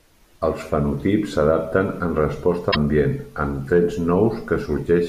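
At 2.71 s the speech jumps abruptly forward, and about 0.06 s of corrupted sound follows until 2.76 s. This is likely a broken MP3 bit reservoir: after missing frames, roughly two 26.1 ms frames reached back for borrowed data that belonged elsewhere.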